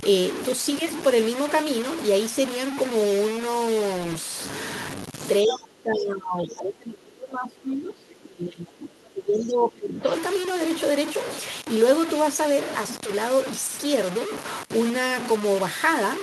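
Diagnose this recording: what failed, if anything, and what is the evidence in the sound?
Throughout the clip the speech is coarse and gritty, with distortion that tracks the signal. This is low bit depth without dither, likely from sample-format conversion truncating to about 4 bits, leaving error only about 10 dB below the signal.

From 5.43 s to 10.09 s the speech dips, falling by roughly 25 dB at its deepest. This points to speech suppressed in double talk, likely in call processing, where the echo canceller attenuated the near talker along with the echo.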